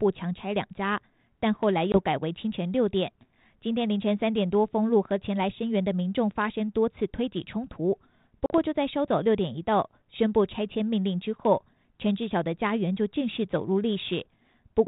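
Packet loss on an ADPCM call at 1.92–1.97 s and 8.46–8.51 s leaves hard-edged silent gaps of 20 and 40 ms. Because the decoder's predictor and step size drift from the sender's, the speech returns slightly distorted before settling.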